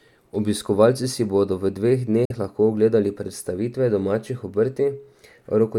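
Audio packets likely failed to reach the headphones in time and were discarded, a Bluetooth dropout, so the output went silent from 2.25 to 2.32 s, right after "si bodo v dveh". About 46 ms of audio is lost, which fits two lost frames. When the packets arrive again, the speech picks up at "lahko ogledali predstavitve domačih" as though it had carried on underneath, so that brief slice is skipped rather than delayed.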